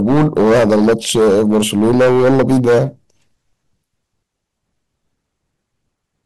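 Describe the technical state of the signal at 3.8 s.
At 3.8 s the speech signal is intact, with no audible fault at that point.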